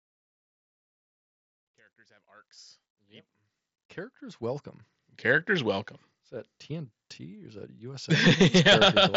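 No technical faults can be heard in this speech recording. The level rises in a smooth fade-in from the opening to 5.07 s, and the sound carries the band-limited character of a Bluetooth mSBC headset link, reaching up to about 8 kHz.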